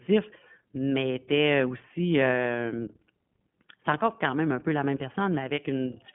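Throughout the speech, iLBC codec damage is plainly audible: nothing above 3.6 kHz and a rough, synthetic quality from each 20 ms frame coded independently, unlike a clean band-limit.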